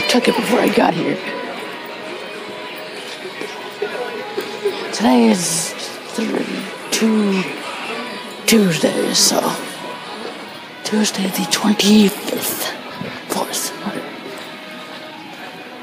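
Throughout, the gain ducks by about 5 dB under each loud sound, a gain pumping effect, likely from excessive input gain driving a fast limiter.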